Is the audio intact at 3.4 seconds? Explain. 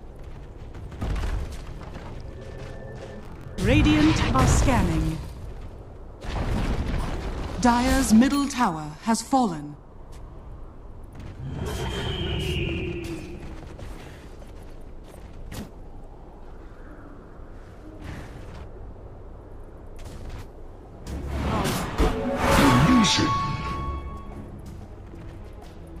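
No. At 3.4 seconds the sound sits inside a burst of processor overload crackle running from about 3.24 to 3.48 s. The processor falls behind on a run of short buffers, which fits buffers of around 10 ms, and roughly ten of them are missed over that stretch. Each miss replays a scrap of old audio with hard edges, so the stretch turns gritty and torn. The rapid, clustered crackle that stops cleanly sets it apart from a single isolated dropout.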